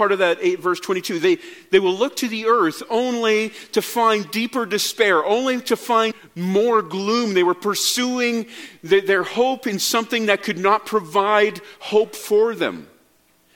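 At 6.08 to 6.13 s, damaged data in the compressed stream makes the decoder lose sync, producing a brief chirp, squawk, click or short hole.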